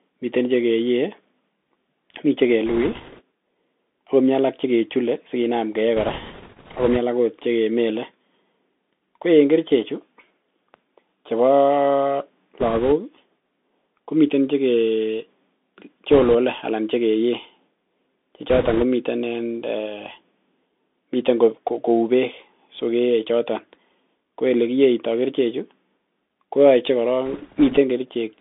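Throughout, the speech carries the sound of a Bluetooth CVSD headset codec. Everything sits in a narrow line band of roughly 250 Hz to 3.6 kHz, which fits the 64 kbps one-bit delta coder used on headset links. Its adaptive step size lags sharp, bright sounds, so sibilants come out scratchy and a fine granular hiss runs underneath. That grainy, slope-limited roughness distinguishes it from a simple low-pass filter, which would only dull the sound.

Bursts of bit errors on a Bluetooth voice link occur at 2.66 to 3.22 s, 5.97 to 6.97 s (right after "alak chekechule sikinam keyee"), 12.60 to 12.92 s, 16.11 to 16.35 s (just before "anan chekeyee"), 18.50 to 18.84 s and 27.26 to 27.78 s. Flipped bits in the delta stream add a rushing crackle over the speech. The burst at 18.5 s has the highest error rate and is the roughest, and the one at 27.3 s is the mildest. Because each bit nudges the waveform only slightly, there are no loud clicks or silent gaps, unlike packet loss.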